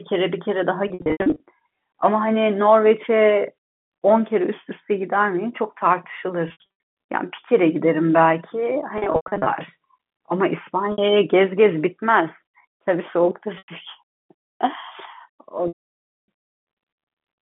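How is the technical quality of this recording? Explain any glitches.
The recording has packet loss with pitch repetition in six places, all heard through the narrow 150 Hz to 3.4 kHz band of G.711 telephone coding. The gaps are at 0.88–1.40 s, 6.48–6.64 s, 8.98–9.46 s, 10.92 s (60 ms), 13.58 s (100 ms) and 15.68–16.28 s. When packets go missing, the receiver loops the last pitch cycle to cover them and fades it out. The short gaps, with runs of 80 to 100 ms, come across as a brief buzzy held tone. The 600 ms hole near the end is long enough for the loop to fade into silence before the speech cross-fades back in.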